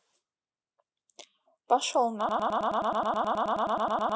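At 2.29 s the speech locks into a broken-record loop that runs to the end of the clip. A fragment about 106 ms long plays back to back, exactly the same each time, 18 times over. The result is a fast, mechanical stutter. Nothing new is heard after the loop starts. The likely cause is a stalled player or stream that kept resending the last fragment it held, so the audio due in those final seconds is lost.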